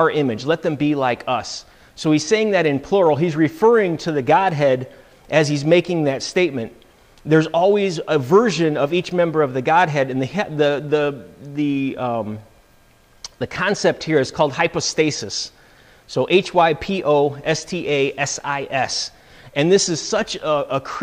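There are no technical faults to describe in time order anywhere in this audio.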